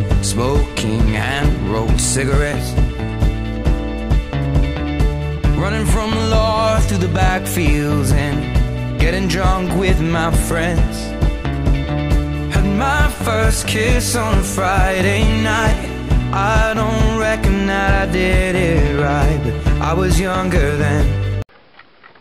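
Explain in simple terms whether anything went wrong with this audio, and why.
Nothing went wrong with this audio that a listener can hear, so there is no fault to explain.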